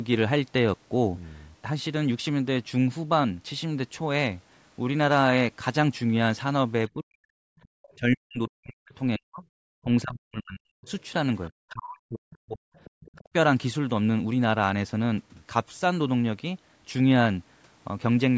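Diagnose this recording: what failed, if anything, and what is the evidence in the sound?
The call's echo canceller, at the call-processing stage, likely mistook simultaneous talk for its own loudspeaker echo and clamped the microphone path. Speech suppressed in double talk is heard from 6.94 to 10.88 s, with about three seconds of the talker pulled down, and again from 11.57 to 13.27 s for about a second. The deepest dips reach around 40 dB, so the voice thins and drops out in fragments rather than fading smoothly.

The same canceller also failed to fully subtract the far-end signal that the loudspeaker fed back into the microphone, so the other side's voice is leaking through. Faint second-voice scraps appear at 7.59 to 7.93 s and 10.89 to 11.5 s, roughly 30 dB below the talker. A longer stretch from 12.33 to 13.29 s sits nearer 25 dB down. That residue is most likely the echo canceller's incomplete estimate of the room and loudspeaker path.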